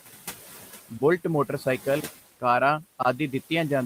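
From start to finish, noise suppressor artifacts shape the background. The room noise, about 18 dB below the speech, is pushed down by about 12 dB in the pauses and swells back up under the speech as the suppressor decides, frame by frame, which bands hold only steady noise. That pumping sets it apart from a simple gate, which would switch the noise cleanly off and on rather than reshaping it band by band.

At 2.00 to 2.03 s and again at 3.03 to 3.05 s, there is a gap between chunks: a hard-edged silent hole about 23 ms long, one second apart. The audio seems to be delivered in one-second chunks, with each new chunk starting slightly late. Unlike a packet-loss dropout, no sound is missing; the audio simply pauses and resumes where it left off. The strict one-second spacing and identical length of each hole point to this cause rather than random network loss.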